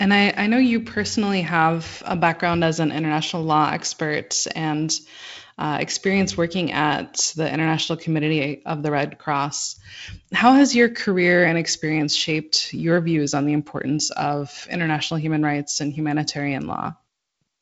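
No technical faults are audible anywhere in this speech.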